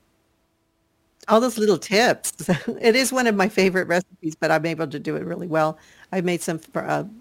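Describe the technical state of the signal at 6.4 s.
A gritty, inharmonic fizz rides on the speech at 6.4 s, as it does across the whole clip. It comes from crude rate conversion from 48 kHz to 44.1 kHz by nearest-sample picking, whose patterned error sits roughly 25 dB below the speech and adds unrelated tones.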